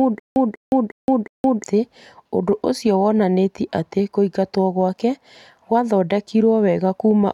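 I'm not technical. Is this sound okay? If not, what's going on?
No. From the very start to about 1.64 s there is a stutter with silent gaps: a short burst of speech, about 0.19 s long, plays four times with about 0.17 s of dead silence between repeats. The playback likely stalled and kept retrying, so the speech meant for that stretch is missing.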